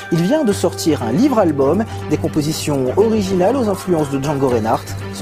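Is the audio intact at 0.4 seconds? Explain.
Yes, at 0.4 s the audio plays through cleanly, with no dropout, click, distortion or other fault to be heard at that moment.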